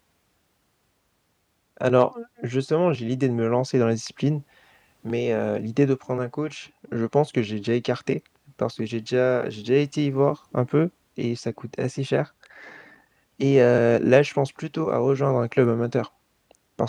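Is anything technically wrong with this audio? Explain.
No, nothing is technically wrong with this audio.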